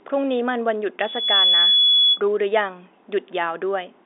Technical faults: loudspeaker feedback squeal

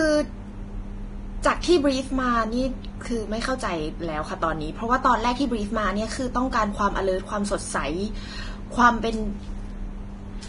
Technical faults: Vorbis compression

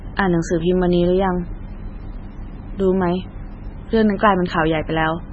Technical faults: MP3 compression

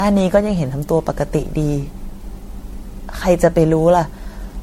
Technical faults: generation loss

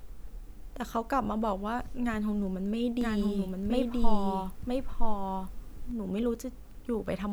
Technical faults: doubled audio track

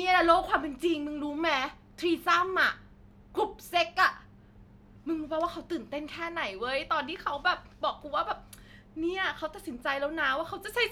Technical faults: none

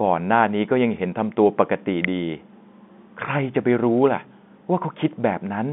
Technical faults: electrical switching spike

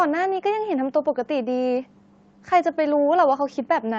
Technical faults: none

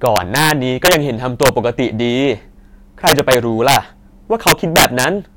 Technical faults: integer overflow

